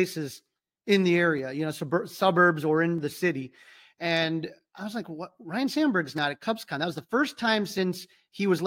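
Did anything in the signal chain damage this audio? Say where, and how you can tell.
Yes. A regular click runs through the speech from 0.59 s to 8.58 s, about ten of them, spaced every 0.8 s. This points to clock drift buffer slips at the driver or buffer stage, likely two devices on independent clocks differing by around 500 ppm, so the buffer periodically drops or repeats roughly 15 samples. On a waveform each slip appears as a tiny discontinuity; a spectrogram shows evenly spaced thin vertical broadband lines.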